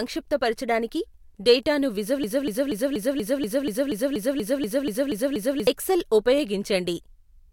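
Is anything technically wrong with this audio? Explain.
Yes. From 2.24 s to 5.67 s the speech turns into a broken-record loop: one fragment of about 240 ms repeats exactly, back to back, 14 times, and whatever should have been heard during those three and a half seconds is gone. This is likely a stall in the player, encoder or stream that kept resending its last held fragment. Echo or reverb would fade and overlap, and brief concealment glitches would vary and stay short; here every repeat is identical, abutting, and sustained.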